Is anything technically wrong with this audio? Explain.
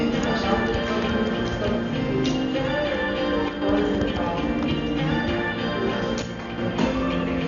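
Yes, two faults. Throughout, the sound is dull and cut off above 6.9 kHz, with rough, fluttering noise around tones, likely Dolby Digital compression at a low bitrate near 48 kbps, where bands without bits are filled with dither noise, unlike the watery swirl of MP3. From 3.49 to 3.62 s and 6.22 to 6.58 s, one channel likely drops out: the level falls abruptly by about 6 dB as the mono sum loses half its input, a step rather than a fade or gap.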